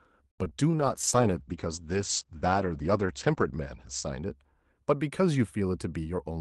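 At 0.31 to 0.40 s there is a short stall from a late packet: the jitter buffer ran dry, so the receiver held the last sound for about 70 ms until the packet arrived, then resumed exactly where it left off. Unlike a loss, nothing is skipped; the sound is simply drawn out, with a faint buzz or dip.

Right after, at 0.44 to 0.47 s and again at 0.49 to 0.53 s, come two short concealed packet losses. About 20 ms of audio never arrived each time, and the gap was bridged by extrapolating the preceding sound before blending back. These are brief smears rather than a held tone, and some real content is actually gone.

From 0.80 to 4.75 s a call bitrate drop sets in. The audio coarsens and turns watery and dull as the top end shrinks from about 12 kHz to about 8 kHz. This fits the encoder falling from roughly 32 kbps to 11 kbps, with the worst stretch lasting about 2.4 s. It is a sustained change in tone, not a momentary glitch.

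Finally, from 5.92 to 6.31 s, a jitter buffer speed-up trims excess delay by cutting out small pitch-period slices, about 70 ms in total. Playback runs at about 117% speed while the pitch stays unchanged, so this stretch sounds hurried rather than higher or muffled.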